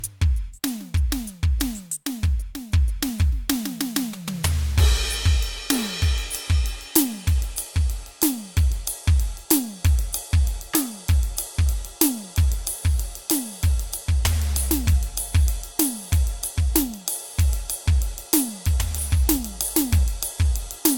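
From start to finish the music carries generation loss: a swirly, hollow smear over the whole mix, with attacks blurred and softened, more degraded than a single lossy pass would leave it. The likely cause is repeated decoding and re-encoding, perhaps three times, in a way that fits AAC-LC at around 96 kbit/s, each pass quantising on a shifted frame grid. A spectrogram shows a hard ceiling at 17 kHz and patchy, flickering holes.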